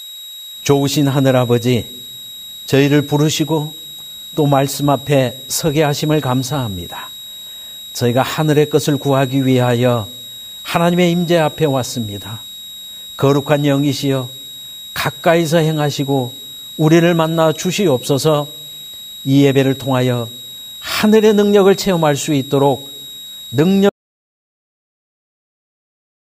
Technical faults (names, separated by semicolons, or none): switching supply whistle; audio dropout to silence